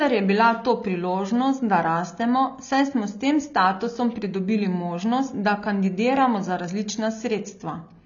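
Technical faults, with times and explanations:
Throughout, AAC compression: the speech sounds dull and smeared, with nothing above 7 kHz and a warbling, fizzy edge on sibilants, which fits a low-bitrate AAC-LC encode, likely near 24 kbps. A spectrogram shows a flat ceiling at 7 kHz with patchy bands below.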